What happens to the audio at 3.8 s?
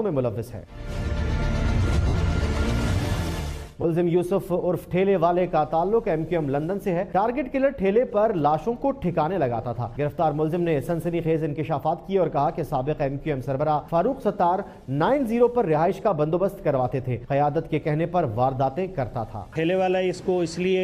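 From 3.82 to 3.85 s there are lost LE Audio frames, roughly 20 ms of audio, which fits two 10 ms frames. The LC3 decoder refills the gap by repeating the last spectrum with randomised signs, so tones briefly smear into noise. A spectrogram shows a thin vertical band of blurred energy, and the waveform shows a short patch of noise-like ripple.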